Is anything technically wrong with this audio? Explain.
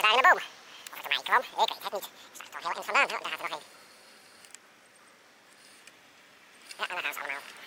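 Yes. All the way through, the audio was read two samples at a time (double speed), likely because the reader assumed two channels or wider samples than were actually there. Everything plays at 2x and a full octave, 12 semitones, too high.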